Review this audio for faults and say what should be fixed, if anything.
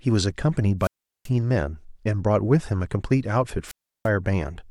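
The wireless microphone's radio signal faded far enough that the receiver's squelch cut the output, giving a wireless microphone squelch dropout twice in this speech: from 0.80 to 1.30 s, with the audio muted for about 0.38 s, and from 3.65 to 4.09 s, muted for 0.34 s. Each time, hiss rises briefly before a hole of near silence, then the speech returns. To prevent it, keep the transmitter within clear line of sight of the receiver antennas and use a diversity receiver on a clean frequency.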